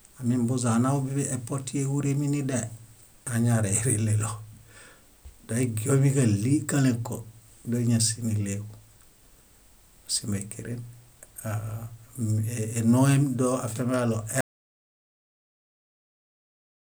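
Audio dropout to silence at 14.41 s, right after "énoem doafiamiġaɭo": the speech cuts out mid-flow and the final 2.5 s are silent with no room tone. The input was likely lost, through a disconnect, failed link or mute, while recording continued writing silence.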